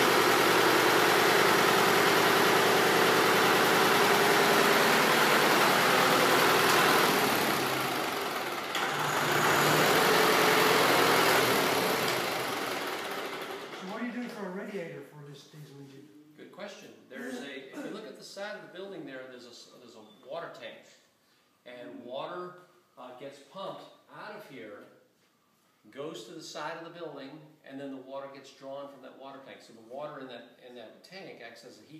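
No faults audible anywhere in the clip.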